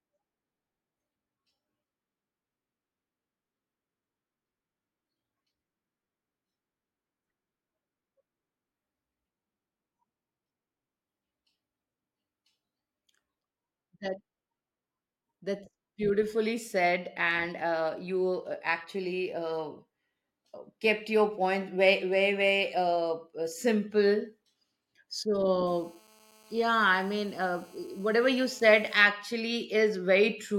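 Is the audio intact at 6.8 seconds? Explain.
Yes, the speech at 6.8 seconds comes through intact, with no dropout, click, distortion or other fault at that moment.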